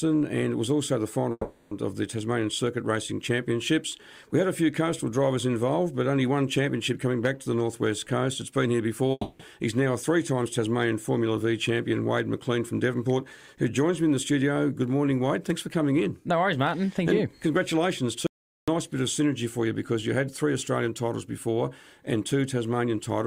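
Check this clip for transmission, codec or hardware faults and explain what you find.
Three faults are audible: two long network dropouts and one audio dropout to silence.

Long network dropouts at 1.31–1.74 s and 9.11–9.42 s: the sound smears into a fading buzz for about 400 ms and 280 ms, then goes silent briefly before resuming with material skipped. This is likely a stalled stream whose receiver extended the last audio before giving up.

Audio dropout to silence at 18.27–18.68 s: the sound cuts off abruptly and leaves about 0.41 s of silence with no background noise, then cuts back in mid-flow. The likely cause is a lost input while the recorder kept writing silence.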